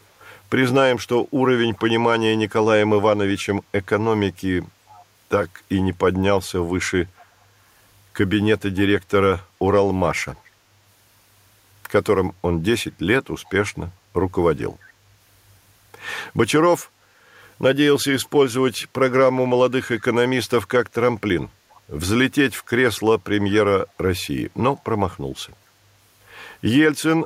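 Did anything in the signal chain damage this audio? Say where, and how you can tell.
Yes: echo leak in call processing. Faint copies, roughly 30 to 35 dB down, repeat 432 ms late at 4.88, 7.18, 10.45, 13.45, 18.82, 21.7 and 24.77 s. The fixed delay separates them from reverb and points to a likely incomplete echo canceller.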